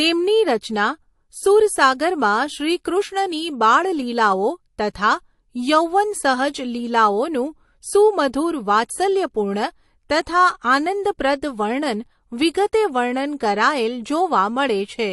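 Across the whole recording, the speech carries plainly audible codec damage, likely from MP3 compression. Quiet detail flickers in and out from frame to frame, which gives a watery, swirling texture. S sounds turn metallic and chirpy. Consonant onsets smear rather than snap. That degree of damage points to a low bitrate, on the order of 48 kbps.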